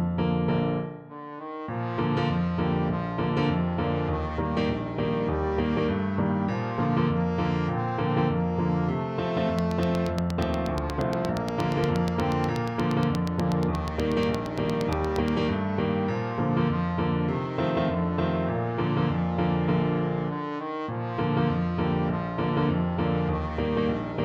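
From 9.59 s to 15.29 s a steady ticking rides over the sound, a train of clicks arriving at a regular 8.4 per second, roughly fifty in all. Each click has much the same sharp shape and stands out clearly, peaking well above the surrounding audio, on the order of 15 dB louder. The even spacing points to a repeating external pulse, likely interference from nearby equipment or a faulty connection or power supply.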